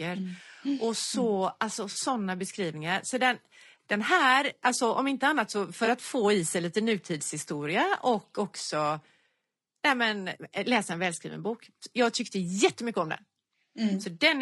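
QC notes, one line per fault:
throughout: low-delay AAC compression, likely AAC-ELD at a rate fitting about 32 kbps. The speech comes across rough and grainy, with noise creeping in between the harmonics and a thin, synthetic top end. Short frames can't resolve pitch finely, so low bitrate hurts.
1.91–1.97 s, 5.85–5.88 s, 8.35–8.38 s: AAC frame loss with concealment. The decoder patches the missing audio from the last good spectrum, giving a brief smeared, noisy or phasey blip. The first is about 40 ms, fitting two lost frames; the others are about 20 ms each.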